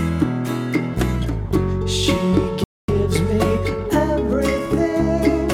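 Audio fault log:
2.64–2.88 s, rebuffering stall: the playback runs dry and falls silent for about 244 ms, because the player exhausted its downloaded audio and paused until more data arrived. What separates this from a network dropout or packet loss is the resumption. The sound picks up at exactly the point where it halted, with nothing skipped or concealed, so no material is missing and the gap simply lengthens the clip by about a quarter of a second.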